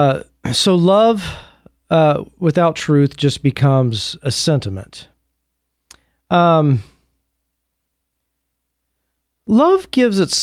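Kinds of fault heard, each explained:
Nothing wrong turns up anywhere in this bit of speech, so there's no fault to list here.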